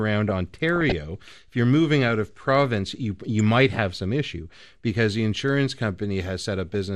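From start to finish the speech sounds dull and plainly granular, with the top end thinned out and a gurgling texture riding on it. This is most likely MP2 compression at a low rate, something around 80 kbps. Unlike the swirly, metallic artefacts of MP3 or AAC, the damage here is coarse and band-wise: whole upper sub-bands drop out and flicker, while the ones that remain sound roughly quantised.

Between 0.73 and 0.92 s a short burst of DAB burbling breaks through: blips of noise in single sub-bands sitting on top of the speech. Weak reception let a small fraction of bit errors slip past error correction into the MP2 stream, so corrupted samples put short blips of noise into individual sub-bands. Packet loss would leave gaps or repeats. Here the sound carries on, but with sudden narrow-band splatter.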